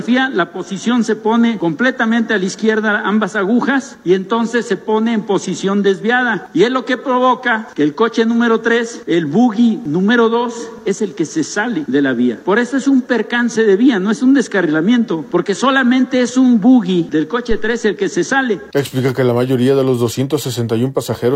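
At 17.51 s a phantom power thump lands: a deep, low-frequency thud that dies away within about 0.3 s, ending by 17.80 s, with the bulk of its energy gone in roughly 65 ms. It comes from a supply being switched on a live input, the sudden DC step passing through the coupling capacitors. Unlike a handling bump or cable knock, it is a single smooth step response with no rattle, scrape or repeated impacts.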